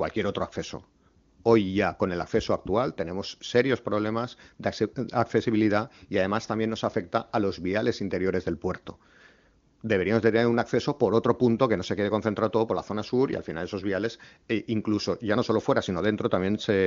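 Nothing stood out on listening to this speech, which sounds consistent with an AMR wideband (HD Voice) path running at a high rate.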